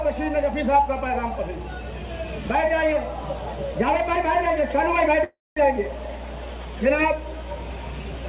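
Mains hum at 60 Hz, about 10 dB below the signal, runs throughout. A ground loop or nearby transformer couples power into the audio, showing as steady horizontal spectrogram lines at 60 Hz and low harmonics.

At 5.24 s a call audio freeze stalls the sound until 5.58 s, likely from delayed packets emptying the jitter buffer. A fading buzz or hiss precedes 210 ms of flat silence in the waveform. Playback then resumes where it stopped, about 324 ms late, with nothing lost.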